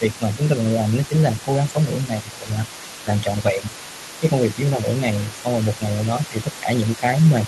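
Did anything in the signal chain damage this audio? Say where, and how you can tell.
Yes. Speech suppressed in double talk shows up at 0.00–0.39, 1.08–1.76, 2.07–2.69, 3.03–3.83, 4.20–4.86, 5.34–5.80 and 6.30 s to the end. The talker dips by up to about 10 dB, shallower near 4.2 and 5.3 s. This is likely call processing, where the echo canceller ducked near-end speech while the far end spoke.

The other side's voice leaks through for the whole clip, sitting roughly 20 dB below the talker. That faint second voice is residual loudspeaker echo. The echo canceller in the call processing stage likely failed to subtract it fully from the microphone path.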